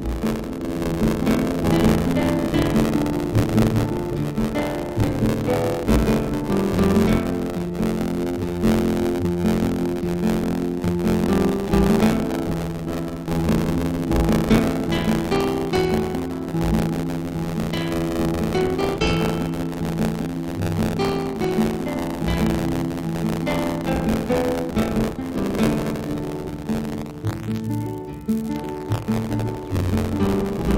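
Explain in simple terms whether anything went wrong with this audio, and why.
Something did go wrong, and it lasts the whole clip: buffer tearing. The software filling the playback buffer and the hardware reading it have drifted out of step, so each short block of audio ends up with roughly a tenth of it replaced by sound from about 40 milliseconds earlier, joined on hard at both edges. Those joins repeat about 86 times a second, which fits a 512-sample buffer, and produce a steady robotic buzz that rides on the sound wherever it is playing.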